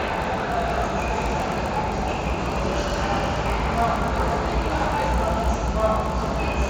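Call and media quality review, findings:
Resampler restarted on every block, audible throughout. Steady 50 Hz buzz riding on the sound, only while there's signal. Component: the 16 kHz to 48 kHz sample-rate converter. It's handling each 20 ms block cold, with no history carried over, so every block edge gets a small interpolation error. Fifty edges a second fuse into a buzz instead of separate ticks. Fix: keep the filter state across blocks.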